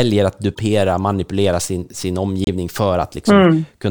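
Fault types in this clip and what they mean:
Corrupt frame decoded: some bits in a compressed frame got flipped and the decoder played it anyway, so misread gains and codes put energy where it doesn't belong. You get two short bursts of about 40 ms, which points to a couple of damaged frames each time. The first is at 0.54 to 0.59 s, right before "manipulera sin sin", peaking around -15 dBFS. The second, at 2.44 to 2.48 s right after it, is much louder, near -5 dBFS.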